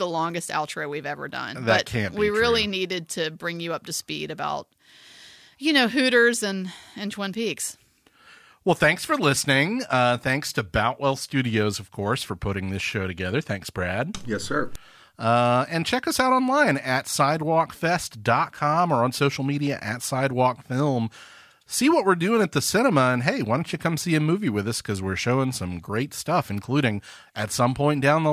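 Nothing technical stands out in this bit of speech; there's no fault to point to anywhere along it.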